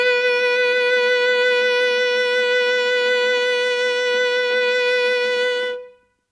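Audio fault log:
No fault is heard in this music.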